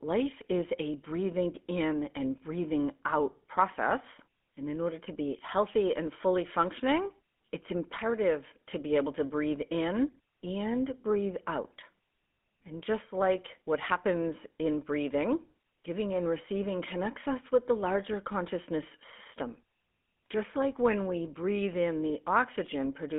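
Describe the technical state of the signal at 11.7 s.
At 11.7 s the speech carries the GSM full-rate codec damage present throughout the clip. The codec models the vocal tract as a filter and drives it with a sparse, regularly spaced pulse excitation that keeps only every third sample, which fits the 13 kbps full-rate scheme. The result is a plainly audible buzzy, gravelly roughness on the voice, and the line band is confined to roughly 200 Hz to 3.5 kHz.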